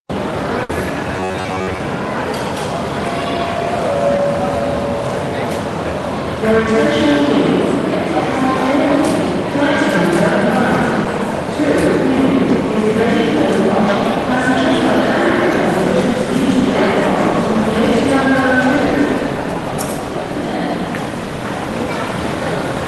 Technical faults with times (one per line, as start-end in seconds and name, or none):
0.63-0.70 burst of packet loss
1.17-1.80 robotic sound from repeated short buffers
4.17-4.19 short concealed packet loss
11.04 short concealed packet loss
18.76 short concealed packet loss